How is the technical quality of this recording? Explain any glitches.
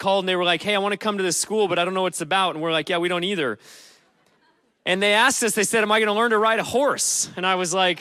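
No glitches to explain: nothing in this recording breaks from normal playback at any point.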